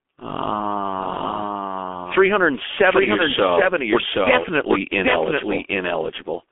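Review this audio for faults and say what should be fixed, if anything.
Two faults run through the whole clip.

A doubled audio track is present from start to finish. A second, full-band copy of the speech trails the original by roughly 0.7 s at about the same level, so every syllable is heard twice. The echo has no decay or room colouring, which rules out acoustic reflection. The likely cause is the signal being captured a second time through a slower path, or an edit that left two copies offset. To prevent it, make sure only one capture path reaches the mix and check edits for duplicated, misaligned regions.

The speech has also been through the G.723.1 codec with heavy damage. The passband sits at roughly 300 Hz to 3.5 kHz, with nothing above 3.6 kHz, so the speech sounds muffled and hoarse. The codec's slow-updating voice model and 30 ms frames smear consonant onsets and fricatives. 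The harshness fits a low rate around 6.3 kbit/s. To prevent it, capture the source before it enters a telephony link, or use a wideband codec at a higher bitrate.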